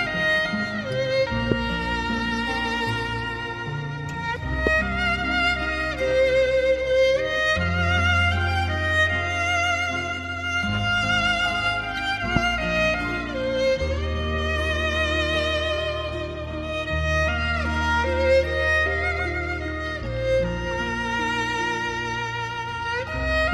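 At 1.52 to 1.54 s, 4.67 to 4.69 s and 12.36 to 12.39 s, a loud pop jumps out, each a single burst about 20 dB above the surrounding sound. The likely cause is a voltage step or pulse, from a plug, switch, static or driver glitch, shaped by the downstream circuitry into a brief thump. Unlike a dropout, nothing is lost: the sound carries on beneath each pop. Each burst lasts about 23 ms, longer and fuller than a tiny tick.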